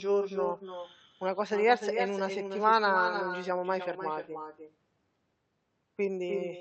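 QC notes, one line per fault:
throughout: echo with no canceller. The far-end microphone picks up its loudspeaker unremoved, so speech returns roughly 300 ms later, about 6 dB quieter and thin.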